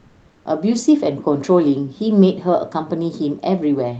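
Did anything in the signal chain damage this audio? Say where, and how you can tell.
Yes. Comfort noise in place of the background from 0.00 to 0.43 s: the background there is a steady, featureless hiss about 2 dB quieter than the real room, sitting about 37 dB below the loud parts. This likely comes from discontinuous transmission in the call codec, which substitutes synthetic noise until speech resumes.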